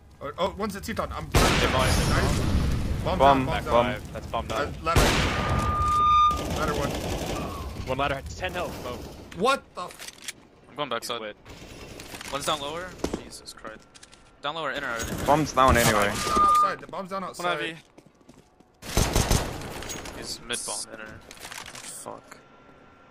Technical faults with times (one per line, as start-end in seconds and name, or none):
4.92-6.56 loudspeaker feedback squeal
16.08-16.81 loudspeaker feedback squeal